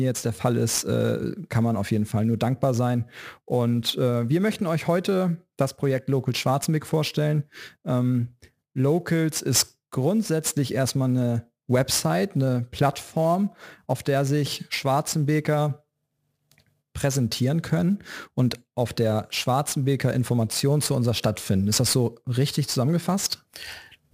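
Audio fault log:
throughout, sample clock jitter: The converter clock wanders by something like 10 microseconds, so each sample lands a little early or late and picks up an error that grows with how steeply the waveform is changing at that instant. The result is a hiss-like roughness riding on the speech at roughly 15 dB below it, rising on loud and bright sounds and vanishing in pauses. On a spectrogram this appears as broadband noise filling in around voiced and sibilant regions, densest at high frequencies, with clean gaps between phrases.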